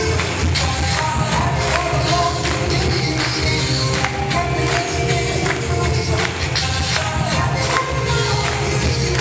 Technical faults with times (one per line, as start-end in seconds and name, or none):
0.00-9.20 aliasing